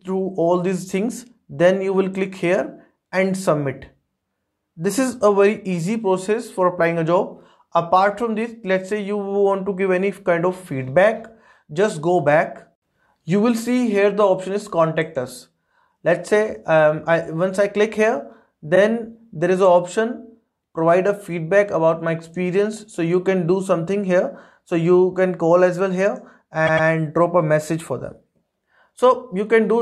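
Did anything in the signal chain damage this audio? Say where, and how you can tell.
Yes, the damage is at the codec or storage stage, where there are repeated frames. At 18.74 s a 26.1 ms slice plays twice, which fits a single compressed frame, heard as a tiny stutter. At 26.66 s a 104.5 ms block repeats two extra times, adding 209 ms. Unlike a dropout, nothing is lost: identical audio returns and the timeline lengthens by exactly the repeated time.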